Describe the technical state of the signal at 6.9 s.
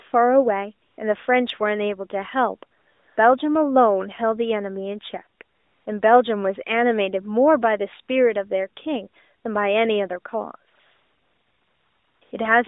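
At 6.9 s the signal is intact, with no fault there, and the speech carries the narrow telephone-band sound of the AMR narrowband mobile codec working as intended.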